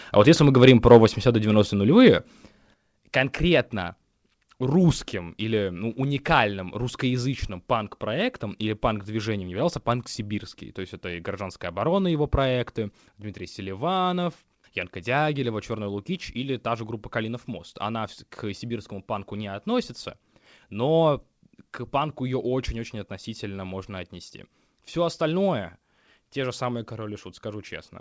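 At 14.24 to 14.29 s, a short stall from a late packet empties the jitter buffer; the receiver stretches the last sound by 17 ms, then the speech resumes with nothing missing.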